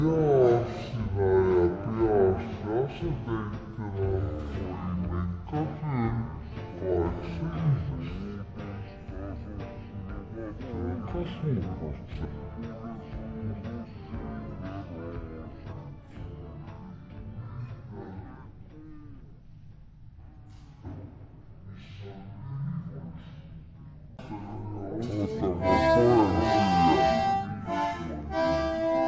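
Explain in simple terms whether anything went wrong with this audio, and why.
The whole clip has a wrong sample rate fault. The audio plays at half its proper speed and sounds a full octave lower, which fits a recording made at 32 kHz being played back at 16 kHz without conversion, so everything is slowed and deepened together.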